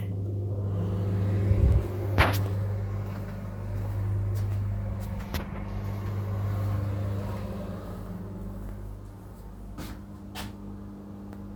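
No technical faults are audible anywhere in this recording.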